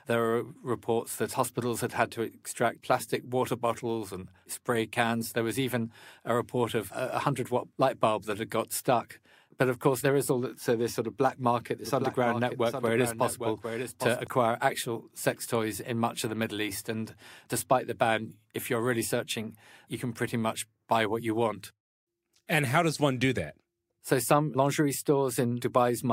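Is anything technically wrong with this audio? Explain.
Yes. From 11.85 to 14.27 s, after "sort of black market" and before "actual sex toys in", the speech is doubled: a dry copy roughly 10 dB quieter trails around 0.7 s behind and cuts in and out abruptly. This is a doubled audio track, likely from a second, slower capture path.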